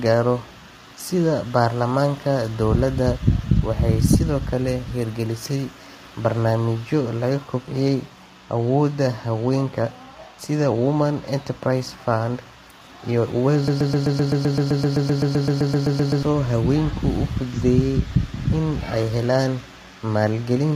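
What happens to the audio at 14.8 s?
At 14.8 s the audio sits inside a broken-record loop from 13.68 to 16.23 s. The stream most likely stalled and kept resending its last buffered fragment. A 129 ms slice repeats 20 times back to back as a rapid stutter, and the sound that should have played there is lost.

The same moment also carries low-delay AAC compression, likely AAC-ELD at a rate that fits about 24 kbps. Its short frames resolve pitch harmonics poorly, so the speech sounds rough and grainy, with noise between the harmonics and a thin, synthetic-sounding top band.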